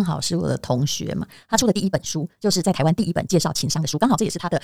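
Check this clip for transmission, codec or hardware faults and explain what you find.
One fault is present, a time-stretched section. From 1.53 s to the end, the speech runs about 1.95 times faster. It is likely software compression that drops short pieces, leaving it rushed. Unlike a sample-rate error, the pitch stays unchanged.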